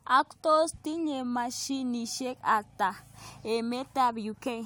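No technical faults can be heard anywhere in this recording.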